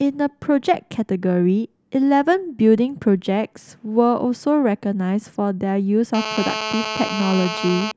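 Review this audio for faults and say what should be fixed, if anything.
GSM phone buzz runs from 6.14 s to 7.92 s. It is a hard, raspy buzz pulsing at 216.7 Hz, rich in harmonics, and it sits about 7 dB below the speech. It holds steady across that stretch, as it does when a nearby 2G phone is on a call. The phone's radio bursts are rectified inside the audio circuitry and come out as this tone. To prevent it, keep mobile phones switched off or well away from the recording gear.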